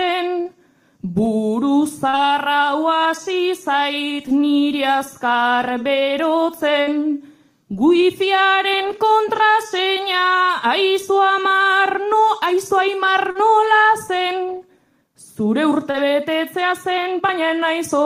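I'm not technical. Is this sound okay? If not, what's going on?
No. The sound briefly breaks up in six places.

Five are short concealed packet loss, at 0.41, 2.09, 13.31, 15.91 and 17.26 seconds. Each time, a sliver of sound (20 to 40 milliseconds) arrived too late to be played, and the receiving end covered the hole by stretching what came just before. You hear a quick smear or wobble rather than silence. What sets these apart is how short they are.

The sixth, from 6.81 to 6.89 seconds, is a burst of packet loss. Several pieces in a row went missing, about 60 milliseconds in all. The receiver again stretched the last sound but let it fade as the gap continued. Then the sound picks up further along, so a bit in between is simply gone. It is longer than the short drops.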